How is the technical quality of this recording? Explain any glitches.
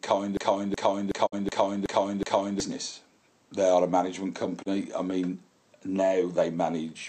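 The recording has two clear technical faults: a long stuck loop near the start and two brief mutes.

From 0.37 s to 2.60 s the same 0.37 s fragment repeats exactly six times, a stutter at about 2.7 Hz. This is a system hang loop: the driver froze while the hardware kept replaying one ring buffer, which fits a 16384-sample buffer, and roughly two seconds of audio are lost.

At 1.25 to 1.34 s and again at 4.61 to 4.68 s the sound fades out over 20 ms into a short hole of 48 ms and then 24 ms before returning. These are digital broadcast dropouts: the receiver muted when frames failed, and the audio in those gaps never arrives.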